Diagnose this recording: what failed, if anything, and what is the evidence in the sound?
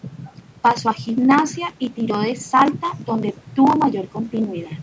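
Nothing failed; no fault is audible in this speech recording.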